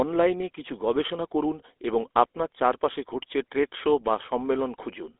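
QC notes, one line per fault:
Throughout: GSM full-rate codec. The speech carries a plainly audible buzzy, gravelly roughness. The coder models the vocal tract as a filter and excites it with a sparse, regularly spaced pulse train that keeps only every third excitation sample, so fine voicing detail is lost and replaced by a coarse, rasping texture, consistent with a 13 kbps full-rate encode. The band sits at roughly 300 Hz to 3.6 kHz, with nothing above 3.8 kHz, which removes sibilance and air.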